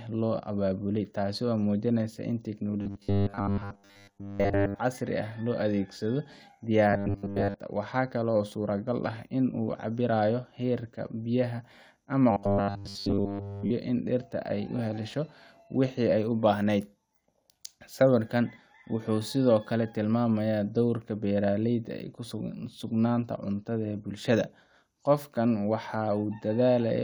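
Right after "muujinaysa in", from 2.82 to 4.79 s, the speech turns into a rigid, metallic 100 Hz buzz. It returns at 6.90 to 7.54 s and, with nothing of the real sound left, at 12.31 to 13.71 s. This robotic sound from repeated short buffers likely comes from a 10 ms slice replayed in place of the missing audio.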